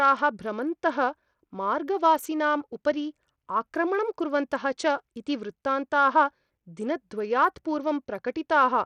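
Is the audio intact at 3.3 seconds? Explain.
No. At 3.3 seconds the speech carries the same damage heard across the whole clip, which points to Bluetooth SBC compression as the likely cause. The codec splits the signal into a few wide frequency bands and shares out a fixed, small number of bits among them. The weak upper bands get almost nothing. The treble here thins and flickers, and a gritty, aliased haze sits on the sound. That degree of damage fits a low bitrate of around 80 kbps.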